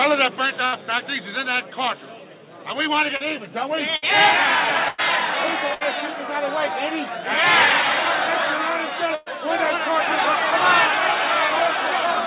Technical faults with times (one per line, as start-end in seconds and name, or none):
0.66-0.74 burst of packet loss
3.16-3.22 short concealed packet loss
3.96-4.04 burst of packet loss
4.88-5.00 burst of packet loss
5.74-5.83 burst of packet loss
9.15-9.28 burst of packet loss